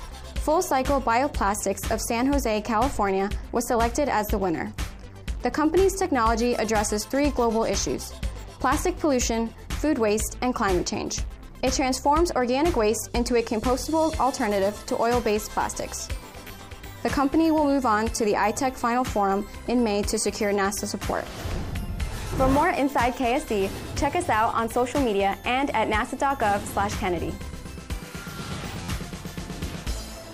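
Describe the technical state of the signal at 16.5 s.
A repeated buffer occurs from 16.48 to 16.50 s. New audio arrived too late, so the same 11.6 ms block played twice more, which fits a 512-sample buffer. Each repeat meets with a hard join. It sounds like a brief buzz, and about 20 ms of audio goes missing.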